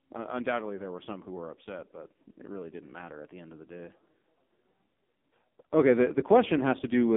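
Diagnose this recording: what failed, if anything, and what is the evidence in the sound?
Codec stage: the AMR narrowband mobile codec is active throughout, limiting speech to 200 Hz–3.6 kHz with nothing above 3.7 kHz. Sparse-pulse excitation makes it heavily buzzy, consistent with a 5.9 kbps mode.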